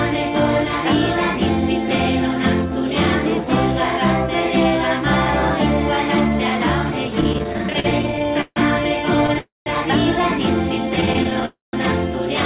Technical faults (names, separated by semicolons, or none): repeated stalls (stutter); call audio freeze; jitter buffer slow-down